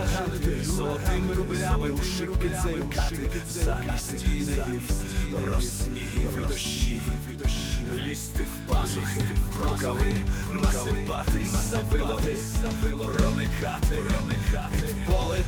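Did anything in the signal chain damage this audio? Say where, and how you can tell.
Yes. A doubled audio track runs through the whole clip: a full-band copy of the sound trails the original by about a second, roughly 5 dB quieter, with no decay or room colour. This likely comes from a second, slower capture path or an edit mixing in an offset copy.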